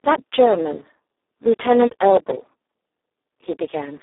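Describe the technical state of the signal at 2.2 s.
At 2.2 s the speech sits inside a burst of processor overload crackle running from 1.94 to 2.53 s. The processor keeps missing its deadlines on very short buffers, a few milliseconds each. Around fifteen are skipped outright. Each leaves a hard-edged gap, so the sound tears with gritty crackle.

Underneath, Speex codec damage is heavy. The speech sounds hoarse, noisy and close to robotic, which points to a very low setting near 4 kbps. The band runs from about 300 Hz to 3.7 kHz, with nothing above 3.8 kHz.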